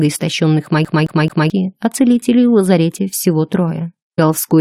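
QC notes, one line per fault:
0.85–1.50 s, CD stuck on one turn: the same 0.22 s slice of audio plays three times in a row, with a brief mute at each jump back, before the sound moves on. This is the laser being thrown back one track at the same point on successive revolutions, so the repeat length stays fixed. That even, rapid stutter of identical fragments sets it apart from a dropout or a forward jump, where nothing is heard twice.
4.18 s, stream segment skipped: the sound lurches forward abruptly with a small blip at the join, and what follows does not continue smoothly from what came before. The likely cause is a segment of the stream failing to load and the player carrying on with the next one, leaving a stretch of the programme missing. Unlike the CD skip, there is no repetition here, only a single discontinuity.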